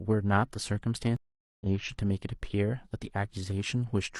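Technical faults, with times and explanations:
1.16 to 1.67 s, stream reconnect: the speech stops dead for about 0.44 s, then resumes roughly half a second further on, slightly muted at first. The connection dropped, the player rejoined a live stream that had moved ahead, and restarted its decoder mid-stream.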